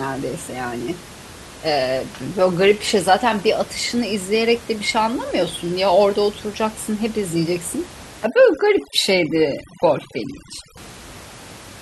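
It's a speech recording with room noise sitting about 19 dB under the voice, and from 8.26 to 10.77 s you get overdone noise removal: the background drops and breaks up into twinkly specks, as the voice's quieter bands get pulled down with the noise.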